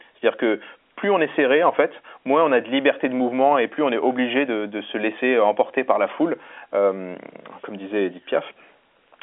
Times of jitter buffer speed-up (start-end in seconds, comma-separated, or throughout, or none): none